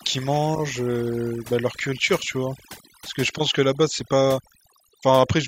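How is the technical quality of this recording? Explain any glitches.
Overdone noise removal runs throughout. Bands near the estimated noise floor are cut hard, leaving near-silent background with twinkling specks. The specks distinguish it from simple gating.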